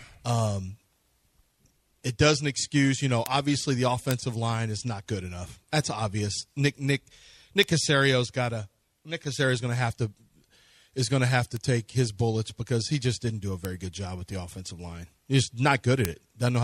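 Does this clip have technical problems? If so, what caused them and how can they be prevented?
Yes. Bit error spikes occur at 3.26, 4.11, 7.63, 11.57, 13.65 and 16.05 s. A single flipped bit throws one sample off by a power of two, reaching about 0 dBFS at worst, giving sharp broadband ticks unrelated to the sound. Error-checked digital links and ECC memory prevent this.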